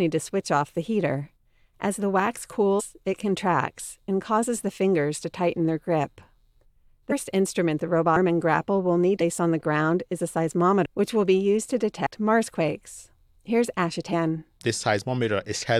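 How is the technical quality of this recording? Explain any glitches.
The speech recording is marred by repeated skips where compressed frames were dropped. These occur at 2.79, 7.11, 8.15, 9.20, 10.85, 12.05, 14.12 and 15.61 s. At each point, whole frames of roughly 23 ms were never decoded, so the speech jumps forward by roughly 7 to 20 frames' worth. That is about 150 ms in half the places, and closer to half a second at 10.85 s. Unlike a dropout, no silence is inserted; the audio simply lurches ahead.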